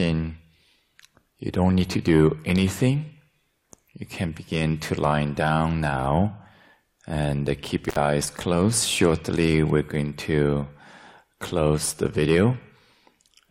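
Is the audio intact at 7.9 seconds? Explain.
No. From 7.89 to 7.96 s there is an intermittent contact fault: a loose cable or plug briefly breaks the connection, so the sound drops out for about 61 ms, with crackle as the contact opens and closes and only faint hiss in between. On a waveform this appears as a sudden collapse to near-flat level bracketed by sharp spikes. A spectrogram shows a narrow dark gap with bright vertical streaks at both edges.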